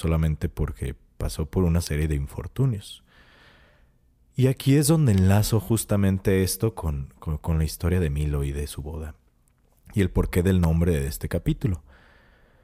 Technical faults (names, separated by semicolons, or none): electrical switching spike